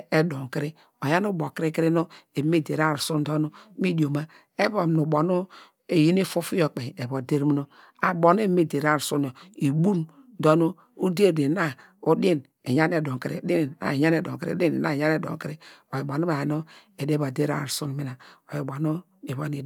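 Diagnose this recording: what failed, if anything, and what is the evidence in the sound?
Nothing failed in this recording; no stage of the chain leaves any audible evidence of a fault. The speech holds steady throughout, with no event anywhere that would point to a problem in capture, conversion, processing, transmission, storage or playback.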